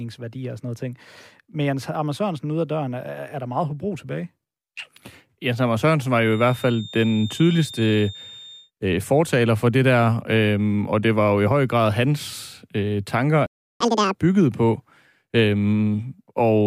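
From 6.17 to 8.72 s a thin, steady feedback whistle at 3.6 kHz sits about 20 dB under the speech, swelling and fading slowly in level. The likely cause is a loudspeaker-to-microphone loop held just at the edge of oscillation, sustaining one tone without escalating.

At 13.46 s the speech cuts out in a playback stall lasting 0.34 s, then resumes. This silence points to the player likely running dry of buffered data or having its output thread blocked, leaving nothing to send until it recovered.

Immediately afterward, from 13.80 to 14.15 s, a catch-up at higher speed follows. The player resamples its backlog at 2.0 times normal rate, so the speech is briefly hurried and raised by around ten semitones before returning to normal speed and pitch.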